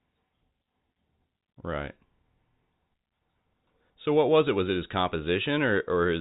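Nothing stood out on listening to this telephone-band speech, which comes through the G.711 path as that format normally sounds.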